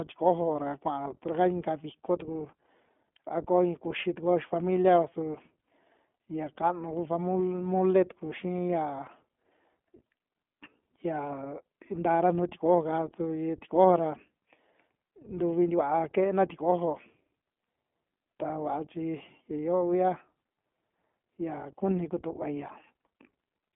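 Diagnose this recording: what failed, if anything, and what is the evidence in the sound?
The speech passed through an iLBC codec stage, a narrowband VoIP coder, for the whole clip. Nothing survives above about 3.6 kHz, and the usable band sits near 200 Hz to 3.4 kHz, so the speech sounds thin and telephone-like. The coding damage is plainly audible as a rough, slightly synthetic texture, which fits the 15.2 kbps mode coding each 20 ms frame independently.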